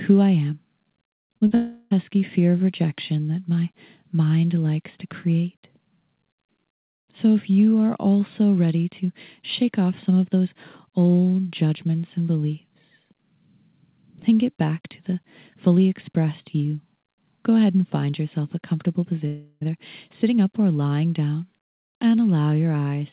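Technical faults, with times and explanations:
1.28 s, 1.38 s and 1.47 s: short concealed packet loss. About 20, 40 and 40 ms went missing and were bridged by extending the preceding sound, heard as quick smears or wobbles.
1.55–1.93 s and 19.27–19.63 s: likely a long network dropout. About 0.36 s and 0.34 s of audio are lost and replaced by a fading continuation of the last sound. The second gap ends in a brief silence of about 30 ms, and the audio resumes further on.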